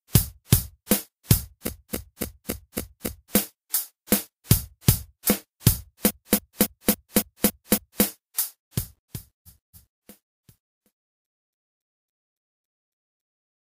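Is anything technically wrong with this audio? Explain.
Yes. Repeated frames at 1.65–3.32 s, 6.06–8.01 s, 9.45–10.01 s and 11.26–13.21 s: a 278.6 ms block was played again, 6, 7, 2 and 7 extra times, so the sound stutters and runs longer.

Truncation distortion on a fade from 8.38 s to the end: the fade-out that begins around 8.4 s was computed with too few bits (it fits about 11 bits) and no dither. The tail turns gritty, worst near 13.8 s.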